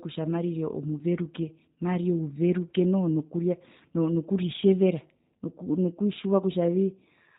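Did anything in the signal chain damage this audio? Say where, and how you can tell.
Yes: the codec stage. Throughout, the speech is band-limited below 4 kHz and sounds rough and synthetic, the plainly audible signature of G.729, consistent with 8 kbit/s pulse-based coding.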